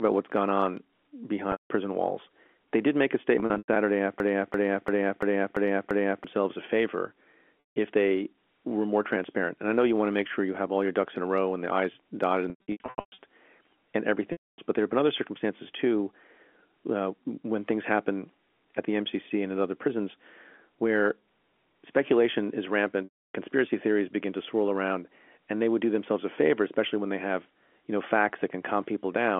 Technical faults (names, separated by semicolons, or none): packet loss with pitch repetition; broken-record loop